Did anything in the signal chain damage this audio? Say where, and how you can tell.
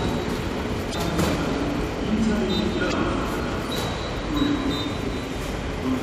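Yes. The damage is at the codec stage, in the compressed stream itself. There are two short bursts of damaged data in a compressed stream, from 0.90 to 0.95 s and from 2.89 to 2.93 s, each about 40 ms long. Each is a brief glitch that does not belong to the sound. Corrupted bytes leave frames the decoder cannot parse, so it briefly outputs garbage, loses sync and resynchronises on the next valid frame header.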